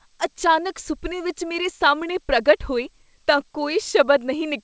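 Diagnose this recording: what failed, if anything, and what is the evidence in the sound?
No fault detected anywhere.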